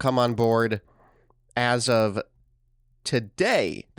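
A speech clip with a resampler restarted on every block, throughout. Each 40 ms block was converted in isolation, so its edges carry small errors. These sound like a buzz at 25 Hz, present only while sound plays. The pattern fits a doubling of the sample rate, such as 24 kHz to 48 kHz.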